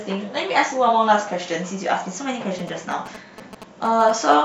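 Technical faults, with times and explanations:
2.59–4.34 s, GSM signalling bursts: a galloping dit-dit-dit of short 217 Hz buzzes, well under the speech, from a nearby 2G phone's radio bursts rectified by the audio circuit.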